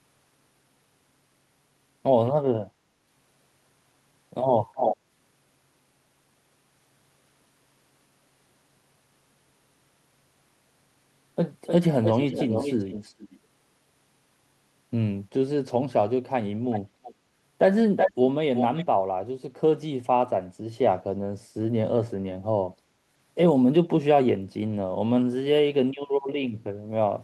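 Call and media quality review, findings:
Echo leak: delayed speech copies at 4.74–4.97, 11.66–11.74, 12.03–13.39, 16.71–16.8, 17.03–17.14, 17.96–18.13, 18.55–18.85 s; lag 303–426 ms, level from near speech to well below. Likely far-end loudspeaker echo canceller passing residual microphone pickup back.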